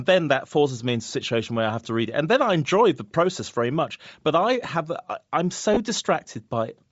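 From the start, the speech has a breathy, grainy edge. The upper spectrum sounds thinned and partly replaced by hiss, which likely comes from Bluetooth LC3 compression at a low bitrate, consistent with about 32 kbps and 10 ms transform frames. On a spectrogram, the high band would look patchy and speckled, with noise-like fill instead of clean harmonic streaks. The waveform itself would show little beyond a slightly fuzzy texture.

At 5.74 to 5.78 s come lost LE Audio frames. The gap fits roughly three 10 ms frames. The decoder covers the loss by repeating the last spectrum with randomised signs, so the speech briefly turns into a short noisy smear instead of dropping out cleanly. A spectrogram would show a smeared block, and the waveform would show a brief stretch of noise-like texture in place of periodic voicing.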